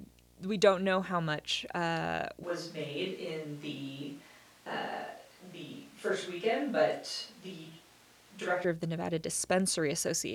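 Video or display buzz runs through the whole recording: a screen or video cable is coupling into the audio path, leaving a steady buzz at the 60 Hz field rate with a band of hash above it, sitting roughly 30 dB below the speech.

From 2.44 s, right after "know how much uh", the close microphone's signal has likely dropped out and a switch to a distant microphone takes over. The speech turns suddenly roomy and hollow with thinner bass and more background noise, around 25 dB down, at much the same level, until it snaps back at 8.64 s before "of the".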